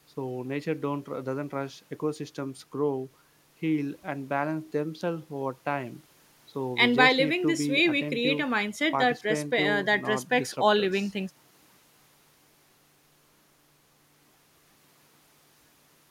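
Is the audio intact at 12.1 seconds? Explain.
Yes, the speech at 12.1 seconds is intact, with no dropout, click, distortion or other fault audible at that moment.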